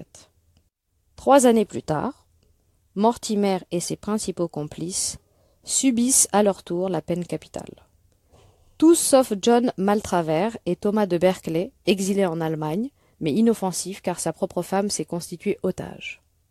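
No technical faults are audible.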